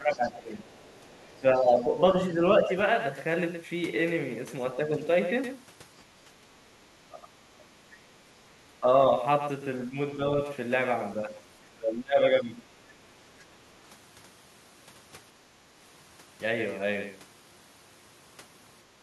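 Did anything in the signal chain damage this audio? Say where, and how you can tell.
Yes. A second capture path or edit likely mixed in a doubled audio track: a copy about 10 dB quieter trails by roughly a tenth of a second throughout.

In call processing, the echo canceller likely caused speech suppressed in double talk, with dips of about 5 to 20 dB at 0–2.72, 6.25–7.63, 8.68–8.86, 9.89–10.21 and 11.22–12.64 s.

The same echo canceller likely let the other side's voice leak through, very faintly, about 30 dB below the talker, from 0.12 to 1.4 s.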